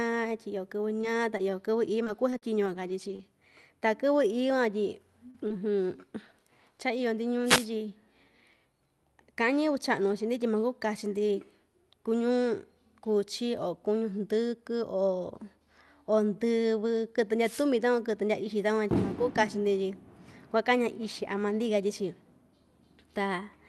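Scattered short gaps run from 1.01 to 3.23 s: roughly seven lost or late packets, the longest about 40 ms. Each was patched by extending the preceding sound, leaving brief ticks and smears.

Short concealed packet loss follows "van tyi" at 5.30–5.36 s, where 40 ms went missing, and again at 5.48–5.52 s, where 20 ms went missing. The decoder continued the last sound and blended back, giving a quick wobble or smear.

A lost packet rebuilt from error correction is heard at 5.34–5.36 s, 5.50–5.52 s and 6.26–6.28 s. In each case the next packet's low-bitrate copy filled the hole, so there is no gap, but those 20 ms sound rougher and noisier.

Wireless microphone noise hits occur at 7.44–7.67 s and at 17.42–17.66 s, just before "takuan kɨtɨ ndyaa ixi". The FM radio signal faded through cancelling reflections, and receiver noise rose into a short swish of static.

All of this passed through an Opus call path at 40 kbps, limited to 12 kHz.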